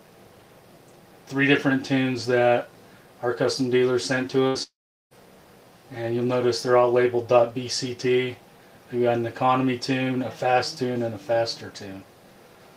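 At 4.47 s the sound briefly smears into a held buzz or fading hiss for about 70 ms before jumping ahead. This is a burst of packet loss: around 80 ms of audio never arrived in time, so the receiver stretched and faded the last sound over the gap.

Only 50 ms later, at 4.63 s, the sound again turns into a fading buzz or hiss that gives way to roughly 0.38 s of silence, returning at 5.14 s with about half a second gone. This is likely a long network dropout, with nothing reaching the receiver while it concealed and then went quiet.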